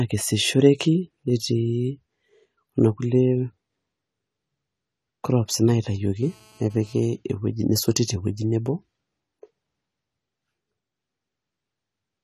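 A speech clip, and the whole thing sounds dull and a bit smeared, with nothing at all above about 13.9 kHz and a warbly, fizzy edge on the sibilants. That's likely AAC compression, AAC-LC at a low bitrate; the damage fits something around 32 kbps, where the encoder drops the top end and starves the bands it keeps. Then from 6.23 to 7.03 s, right before "ewueji nesoti te wuei", there's GSM phone buzz: a hard, raspy 217 Hz buzz full of harmonics, steady like a handset on a call nearby, sitting about 32 dB under the speech.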